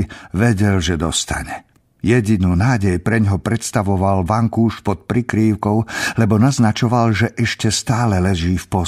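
Nothing stood out as a technical fault on listening to this speech recording.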